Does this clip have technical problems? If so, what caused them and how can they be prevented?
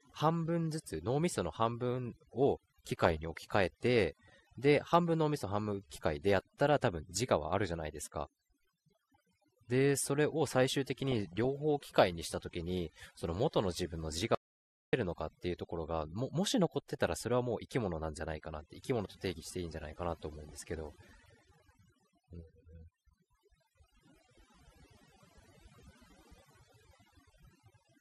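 Yes. Overdone noise removal runs through the whole clip. The background drops and breaks up into twinkling specks. Use gentler reduction settings and check the result by ear.

The speech is dull throughout, with a gurgling, granular edge. Upper bands seem to flicker on and off. This is likely MP2 compression at a low rate, which fits an 80 kbps stream. A higher bitrate or a more efficient codec would prevent it.

DAB burbling appears at 2.98 to 3.17 s, 11.07 to 11.47 s, 16.89 to 16.95 s and 20.33 to 20.76 s. Short blips of noise appear in single frequency bands. A small share of bit errors got past error correction into the audio data. Better reception or a stronger antenna would prevent it.

An audio dropout to silence runs from 14.35 to 14.93 s, about 0.58 s. The sound cuts to total silence with no room tone. Whatever was said there is lost. The likely cause is a lost input or link while recording continued. 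Secure connections and monitor the input level.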